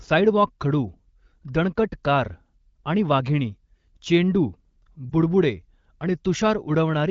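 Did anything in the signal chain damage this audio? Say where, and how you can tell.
Yes: in the network stage, from 5.10 to 5.13 s, where a lost AMR speech frame left a gap the decoder had to conceal. A radio error most likely corrupted the frame so it failed its checksum, and the AMR-WB decoder reused the previous pitch and vocal tract settings at reduced gain. The result is a brief dip in the speech, and its length fits a single 20 ms frame. The wideband codec at 15.85 kbit/s adds only light coding damage of its own.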